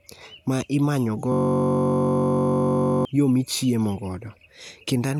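From 1.32 s to 3.05 s, just after "ma imanyo", the speech gives way to a system hang loop. The system stalled while the audio hardware kept replaying one 21.3 ms slice of its ring buffer, which fits a 1024-sample buffer. Because the slice is so short, it sounds like a steady buzz at 46.9 Hz. About one and a half seconds of speech are lost before "yo michiemo" resumes. On a waveform the identical cycle repeats dozens of times, and a spectrogram shows flat horizontal harmonic lines spaced 46.9 Hz apart.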